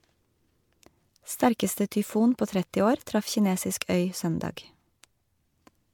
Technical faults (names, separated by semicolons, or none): generation loss